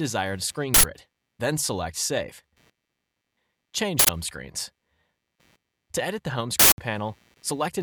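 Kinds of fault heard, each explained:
Computer activity noise: processor, graphics card or mouse load shifting the shared ground, heard throughout as a buzz pulsing around 100 Hz, about 40 dB down; a spectrogram shows faint harmonic lines.
Uninitialised buffer: leftover memory played as sound, producing noise bursts at 0.74, 3.99 and 6.60 s, lasting 93, 93 and 186 ms; waveforms show abrupt blocks, fitting 4096- and 8192-sample buffers.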